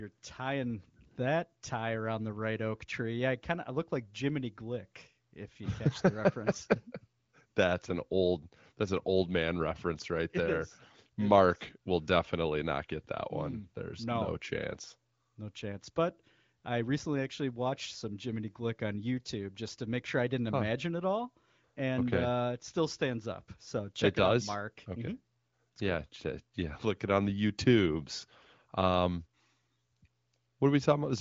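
The speech carries the band-limited character of the AMR wideband (HD Voice) codec, with nothing above about 7.5 kHz and a clarity that points to one of its higher rates, and no technical fault can be heard anywhere in it.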